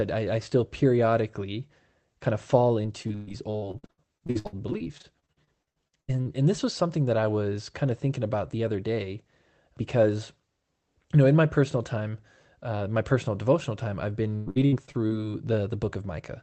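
Right after "periodically kind of fall", from 2.83 to 6.27 s, repeated packet loss gives a choppy, robotic sound. Short holes keep getting patched by stretching the last sound, the longest about 116 ms. It returns after "personal devotional time I've", 14.35 to 15.12 s.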